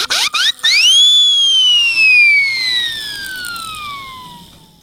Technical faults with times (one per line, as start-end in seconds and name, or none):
0.00-4.83 gain pumping